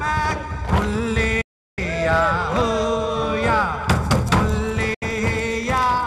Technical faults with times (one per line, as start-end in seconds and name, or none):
1.41-1.79 digital broadcast dropout
4.94-5.03 digital broadcast dropout